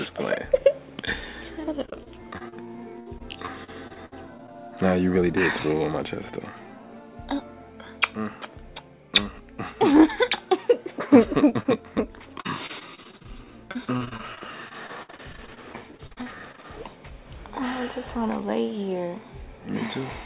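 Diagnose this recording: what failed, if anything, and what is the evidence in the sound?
The network stage failed, with packets lost or arriving too late for the receiver's jitter buffer. Repeated packet loss (robotic sound) shows up in four stretches: 1.86 to 2.54 s, 3.00 to 4.54 s, 12.41 to 13.30 s and 13.71 to 16.65 s. In each, holes up to 63 ms long recur closely, and roughly a fifth of the stretch is concealed by extending the previous sound. The result is choppy audio with pieces missing.

Short concealed packet loss appears twice in quick succession, at 11.49 to 11.53 s and 11.63 to 11.67 s, with about 20 ms of audio lost each time. This is the same network fault in isolated form. The decoder continued the preceding sound across each gap and crossfaded back into the real signal, which produces a brief smear or wobble rather than a sustained robotic texture. The band limit near 4 kHz fits the G.711 call codec at 64 kbps.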